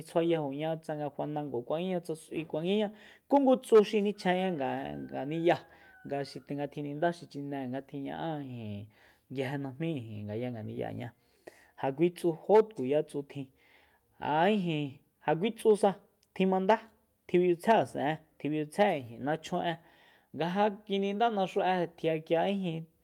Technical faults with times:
none

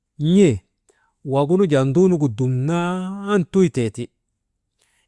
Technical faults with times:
none

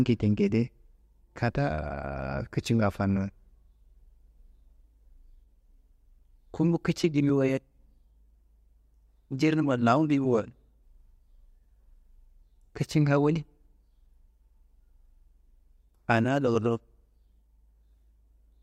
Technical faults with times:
none

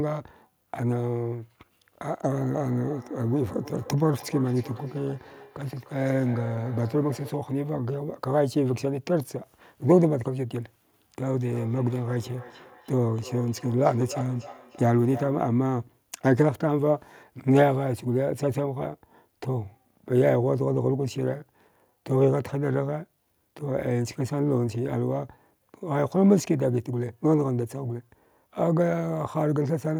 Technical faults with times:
2.11-7.53 feedback echo between two devices
11.46-15.71 feedback echo between two devices

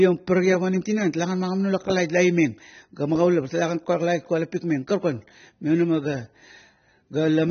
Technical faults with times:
0.00-7.51 AAC compression

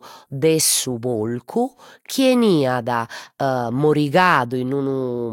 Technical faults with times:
none

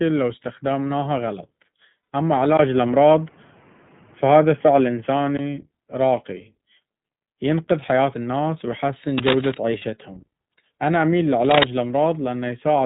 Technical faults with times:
0.00-12.85 iLBC codec
2.02-2.08 lost iLBC frames
2.57-5.39 input switched to a poorer device
9.78-9.85 lost iLBC frames
11.44-11.64 cable scratch noise

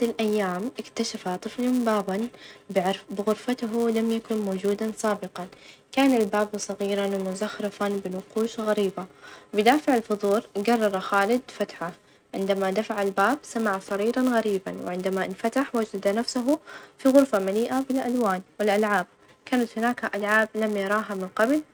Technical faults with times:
0.00-21.73 filter restarted on every block

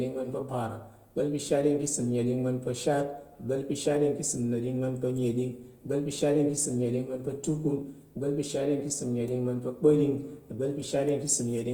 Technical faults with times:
0.00-11.73 Opus compression

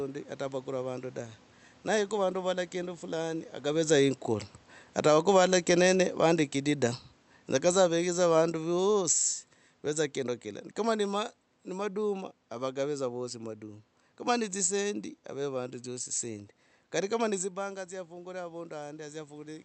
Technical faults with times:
2.13-14.82 automatic gain falling
17.86-19.65 video or display buzz

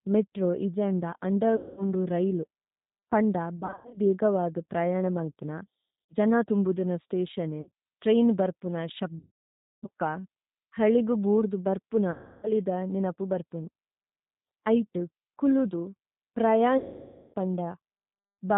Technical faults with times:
0.00-18.57 G.729 codec
1.56-1.84 VoIP packet loss concealed by the speech codec
3.57-4.00 VoIP packet loss concealed by the speech codec
6.07-6.14 VoIP packet loss concealed by the speech codec
7.61-7.70 VoIP packet loss concealed by the speech codec
9.19-9.88 VoIP packet loss concealed by the speech codec
12.11-12.52 VoIP packet loss concealed by the speech codec
16.78-17.34 VoIP packet loss concealed by the speech codec

